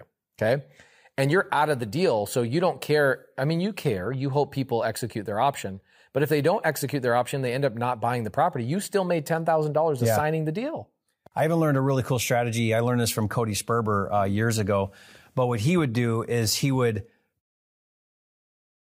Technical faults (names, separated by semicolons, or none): none